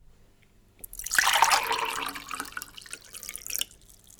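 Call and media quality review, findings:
Hard clipping, 1.19–1.54 s and 3.56–3.61 s: gain stage or converter overdriven about 8 dB, then about 6 dB, so peaks get cut flat. Flat tops add high harmonics, heard as crackle on peaks.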